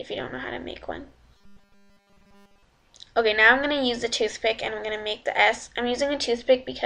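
From 1.37 s to 2.63 s the audio turns into robotic sound from repeated short buffers: a rigid, metallic buzz locked at 200 Hz that only loosely follows the underlying sound. The likely cause is new data arriving too seldom, so playback keeps looping the most recent 5 ms chunk, and over that stretch essentially everything heard is repetition. Unlike ordinary stutter, which replays longer, audible fragments, this one fuses into a steady tone at one over the buffer length.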